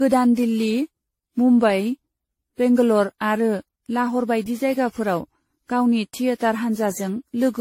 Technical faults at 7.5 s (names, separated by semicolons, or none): generation loss